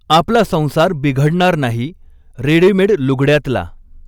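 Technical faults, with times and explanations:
Throughout, hard clipping: the speech is driven about 9 dB past what the stage can pass, so the loudest peaks, a small fraction of samples (roughly one or two percent), are sliced flat. Those squared tops generate high harmonics, heard as a crackly, gritty edge on louder syllables.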